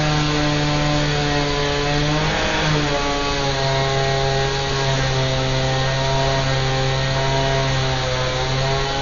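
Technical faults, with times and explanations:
Throughout: Dolby Digital compression. The sound is dull, with nothing above 7 kHz, and carries a rough, fluttering noise around tonal parts from heavy codec damage. This is likely an AC-3 encode at a low rate, consistent with about 48 kbps, where starved frequency lines are filled with dither noise.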